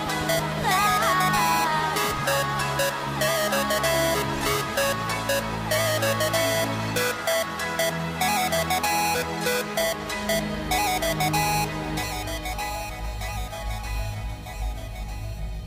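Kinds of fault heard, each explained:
No faults heard.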